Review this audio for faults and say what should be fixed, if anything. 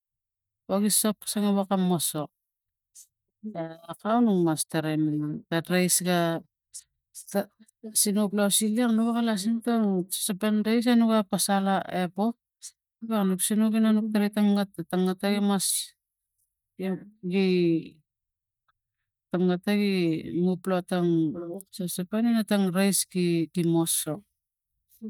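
Nothing in the signal needs fixing, as the recording holds steady throughout with no audible technical defect at any point.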